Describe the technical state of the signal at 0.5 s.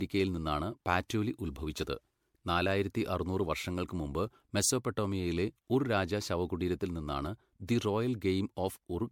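At 0.5 s the speech sounds swirly, hollow and smeared, with softened consonant attacks and nothing above 19.8 kHz, as it does throughout. This is likely generation loss: roughly seven rounds of MP3 coding at what sounds like 96 kbit/s, each re-quantising on a shifted frame grid and compounding noise and spectral holes.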